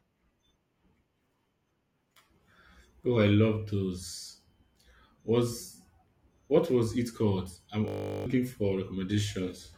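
A system hang loop froze this speech clip from 7.88 to 8.26 s, just after "was it called I'm": a 20 ms buffer repeated at 50 Hz, producing a steady buzz replacing roughly 0.4 s of audio.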